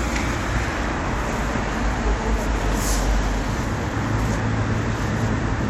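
At 3.63 s, damaged data in the compressed stream makes the decoder misread a frame and lose sync, producing a brief glitch in the sound.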